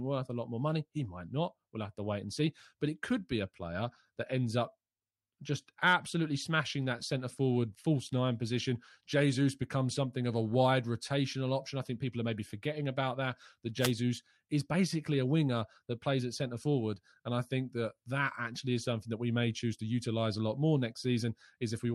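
At 13.79 s a wireless microphone noise hit breaks into the speech and clears by 13.93 s, lasting about 0.13 s. The radio signal from the analogue FM transmitter fades briefly as reflected paths cancel the direct one, so receiver noise swells and covers the voice with a quick swish of static. Unlike a digital dropout, the sound is not cut to silence. Hiss rises over the speech and then recedes.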